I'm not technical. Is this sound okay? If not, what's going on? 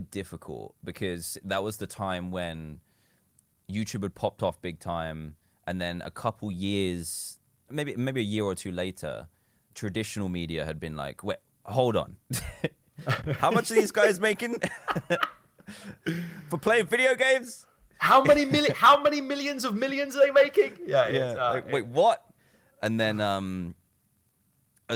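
Yes, no faults are audible in this speech recording; it has the light touch of Opus voice compression, which is normal.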